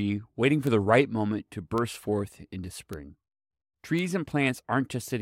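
Bit error spikes at 0.67, 1.78, 2.93 and 3.99 s: each time, a single sample of the speech has one flipped bit, so its value leaps by a power of two and snaps straight back, giving an isolated, broadband tick unrelated to the surrounding sound.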